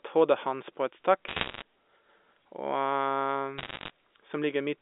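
Sharp ticks and crackle break over the speech from 1.28 to 1.62 s and again from 3.58 to 3.9 s. These are bit errors on a digital phone line: at error rates of roughly 1.5 and 1 percent, flipped bits corrupt individual samples of the narrowband G.711 signal, and hits on sign or high bits produce clicks.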